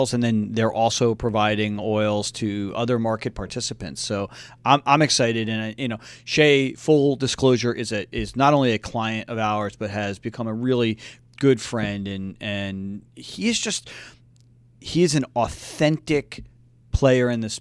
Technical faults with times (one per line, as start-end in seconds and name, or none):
none